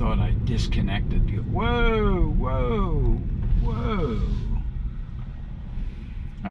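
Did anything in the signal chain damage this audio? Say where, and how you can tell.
No, nothing along the way seems to have damaged this audio, and there's no point where any stage of the chain shows itself in what you hear.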